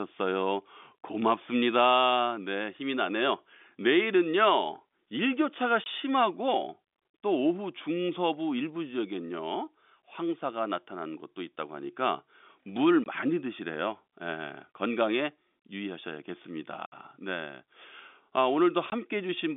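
At 5.84 and 13.04 s, 20 ms holes, then a 60 ms one at 16.86 s and a 20 ms one at 18.9 s: packet loss filled with silence, leaving dead gaps instead of smeared concealment.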